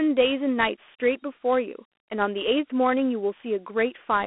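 The speech passed through Dialogic VOX ADPCM, the 4-bit OKI-style phone codec, at a rate that fits 32 kbps. Nothing survives above 3.9 kHz, lows fall away below 250 Hz, and a plainly audible gritty hiss rides along with every syllable throughout.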